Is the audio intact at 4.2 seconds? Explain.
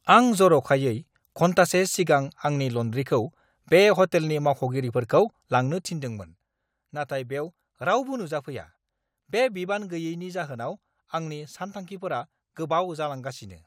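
Yes, the speech is intact at 4.2 seconds, with no audible fault at that moment.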